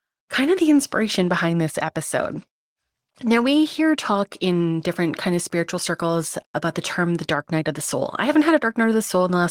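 No technical faults are audible anywhere in the speech recording.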